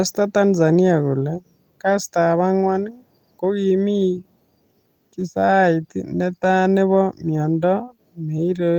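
At 1.89 s the speech turns briefly rough and grainy, easing back by 1.99 s. This is a lost packet rebuilt from error correction. Some packets never arrived, and about 60 ms of audio had to be filled from backup data. The following packets each carried a low-bitrate copy of the lost audio, and the decoder played those copies. The pattern fits three lost packets. No gap or dropout is heard, only a short stretch of coarser, noisier sound.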